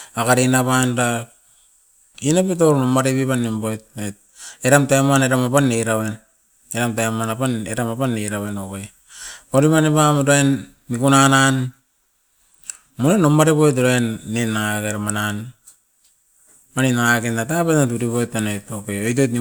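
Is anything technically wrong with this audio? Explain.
No, nothing stood out as technically wrong when listening to this speech recording.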